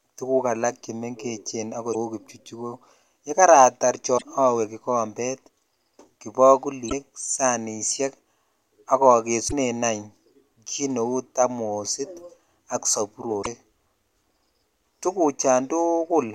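Damaged data in a compressed stream hits this speech five times: at 1.90–1.95 s, 4.14–4.23 s, 6.86–6.93 s, 9.45–9.53 s and 13.39–13.47 s. Corrupted bytes leave the decoder unable to read those frames, so it loses sync and hunts for the next valid frame header. Each time, roughly 60 to 80 ms of the speech is replaced by a short chirp, squawk, click or hole before normal decoding resumes.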